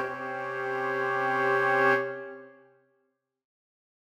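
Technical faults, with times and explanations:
Nothing technical to flag here; the audio holds together without any problem worth pointing out.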